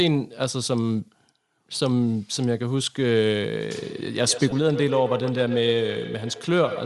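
A speech recording with a breathy, grainy edge throughout and noise-like upper frequencies, likely Bluetooth LC3 compression, with the codec filling zeroed high bands with noise at a setting consistent with about 48 kbps. From 3.75 s to the end, the speech returns at intervals of about 150 ms, thinner and ringing, peaking about 8 dB below the speech. This is feedback echo between two devices, where one device replays what the other's microphone sent and that microphone picks it up again. At 4.50 s there is a brief 15 ms noisy smear from lost LE Audio frames, which fits two 7.5 ms frames concealed by reusing the previous spectrum with randomised signs.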